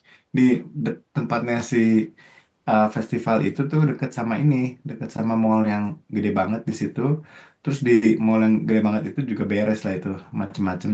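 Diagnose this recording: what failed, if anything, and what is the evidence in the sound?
Nothing failed: the speech shows the ordinary character of a call path, with its content ending at 8 kHz as expected from the call's microphone processing and a wideband codec setting, and no dropouts, clicks, distortion or timing disturbances anywhere in the signal.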